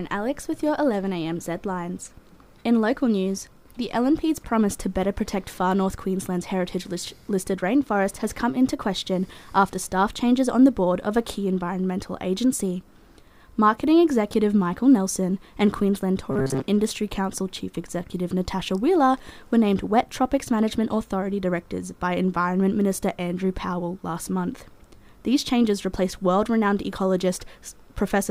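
From 16.31 to 16.62 s the sound turns into a rigid metallic buzz near 133 Hz, the robotic sound from repeated short buffers. Audio likely arrived too seldom, so a roughly 7.5 ms slice was looped over most of the passage. Unlike a dropout, nothing goes silent.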